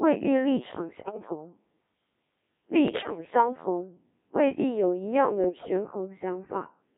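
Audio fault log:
Throughout: Codec 2 vocoder. The speech sounds robotic and buzzy, as if rebuilt from a pitch track and a smoothed spectral outline rather than carried as a waveform. Breath, consonant detail and natural roughness are gone, and the very coarse result fits the 1.3 kbit/s mode. The band runs from about 150 Hz to 3.6 kHz. Unlike an ordinary low-bitrate codec's smearing or swirl, every voiced stretch has the same synthetic, sine-built hum.
1.01–1.17 s, 2.88–3.30 s, 5.44–5.69 s: bit errors on digital voice radio. In these bursts the synthetic voice jumps in pitch, level and tone colour and breaks into warbles, bleeps and garbled robotic sound. This points to roughly one bit in ten arriving wrong, a little fewer in the last burst. Each bad bit sets pitch or spectrum for a whole frame, so damage comes in frame-sized lumps. The longest burst, at 0.42 s, fits about nine frames. Packet loss would give gaps or repeats instead of these wild parameter jumps.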